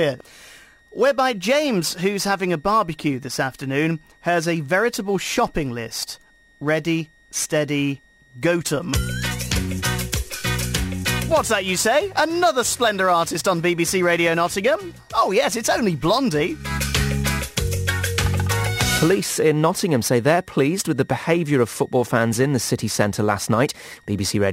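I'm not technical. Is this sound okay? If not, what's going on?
No. A faint, high whistle sits under the sound for the whole clip, wavering slightly in pitch between about 1.8 and 1.9 kHz. This is switching supply whistle: a power adapter or supply in the recording chain is buzzing at an audible pitch that leaks into the audio.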